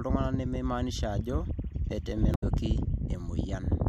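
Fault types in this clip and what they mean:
Damaged data in a compressed stream: corrupted bytes make the decoder lose sync, giving a brief glitch in the speech from 2.31 to 2.44 s.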